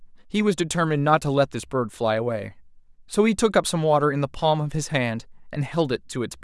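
Nothing goes wrong anywhere in this recording, so there's no technical fault to describe at any point along the way.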